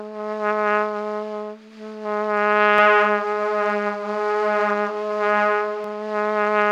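From 2.78 to 5.84 s the sound carries a doubled audio track: a second, equally loud copy trails roughly 150 ms behind, likely from a slower capture path. It starts and stops abruptly, and each waveform onset and spectrogram event appears twice.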